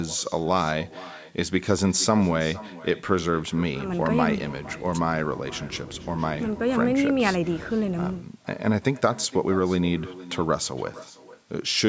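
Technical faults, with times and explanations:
Throughout, echo with no canceller: every phrase is trailed about half a second later by a quieter copy, roughly 18 dB below the direct speech, sounding thinner than the original. The far end is playing the call over a loudspeaker, its microphone captures that playback, and no echo cancellation removes it, so the signal returns after the network round trip. The band-limited call path, with nothing above 8 kHz, carries both the speech and its echo.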